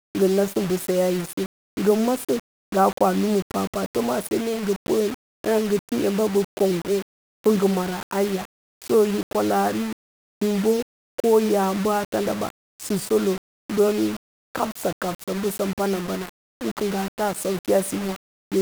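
Throughout the speech, a coarse, grainy distortion rides on every sound, with grit only about 15 dB below the signal, quiet tails sputtering or dropping out. This is likely low bit depth without dither, rounded to roughly 5 bits, so the error tracks the signal.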